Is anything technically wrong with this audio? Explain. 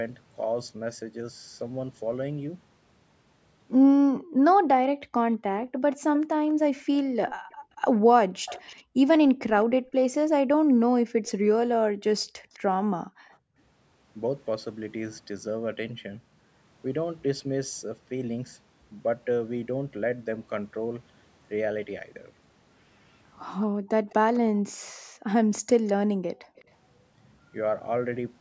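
Yes. Between 4.16 and 13.57 s, and again from 23.67 to 26.56 s, the background is gated by the echo canceller. It suppresses the microphone during far-end playback, so room sound drops out by up to about 40 dB, for roughly two seconds and then one second in total.

Over 5.64 to 13.37 s and 23.6 to 26.64 s there is an echo leak. A faint copy of the speech trails 205 ms behind, roughly 20 dB and then 25 dB down, likely from loudspeaker pickup that cancellation missed.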